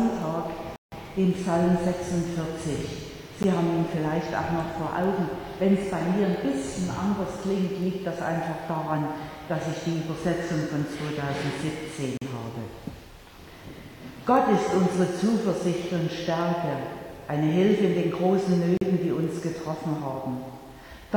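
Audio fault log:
0.76–0.92 s, 3.43 s, 12.17–12.21 s and 18.77–18.81 s: block of digital silence. The samples drop to silence for 160 ms, about 14 ms, 40 ms and 40 ms, as if the output buffer went unfilled in time. The 160 ms gap is a short hole, the 14 ms one a tick. A waveform shows near-flat lines, and a spectrogram shows blank columns.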